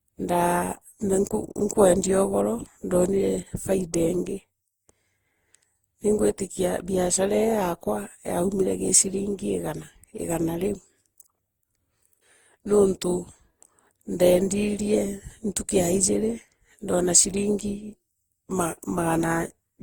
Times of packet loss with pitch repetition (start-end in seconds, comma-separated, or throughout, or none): none